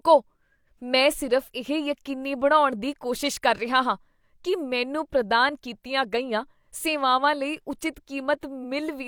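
Repeated frames at 8.60 to 8.65 s: a 42.7 ms block of the compressed speech is decoded and played a second time, which fits one frame being written or sent twice. It is heard as a brief stutter near the end, and it lengthens the audio by 42.7 ms.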